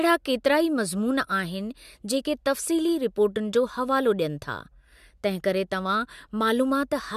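Nothing is technically wrong with this speech recording.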